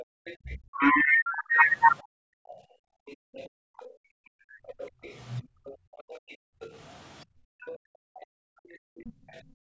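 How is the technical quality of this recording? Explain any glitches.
The recording has clear call-processing faults. A faint second voice runs under the speech, and both the room sound and the talker drop out repeatedly.

Other side's voice leaking through runs from 0.0 to 9.41 s. A second voice sits faintly beneath the main speech, about 25 dB down. It is quiet but persistent. The likely cause is the device's loudspeaker feeding back into the microphone. The echo canceller did not strip all of it out, so a residue stays in the signal.

Background gated by the echo canceller happens twice. The first is a brief dip from 0.05 to 0.25 s. The second comes in pieces from 2.03 s to the end, about four seconds in all. The room tone falls by about 40 dB each time. The canceller clamps the microphone while the loudspeaker plays. The background vanishes, then returns when it releases.

Speech suppressed in double talk hits at 0.55 to 1.67 s, for about a second and about 35 dB deep. 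It hits again within 3.48 to 5.42 s, briefly, about 40 dB deep. The last comes at 9.01 to 9.18 s, about 30 dB deep. The talker's voice sags or breaks up. This is likely the canceller mistaking live speech for echo while both sides talked.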